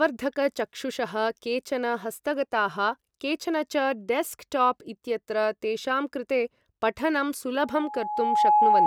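At 7.62 s a loudspeaker feedback squeal starts and runs until the audio ends at 8.87 s. The microphone is picking up the loudspeaker it feeds, and at about 843 Hz the loop gain exceeds unity, so that one frequency reinforces itself on each pass. It is heard as a steady tone that swells over roughly a second into a piercing squeal, finishing around 10 dB louder than the speech beneath it.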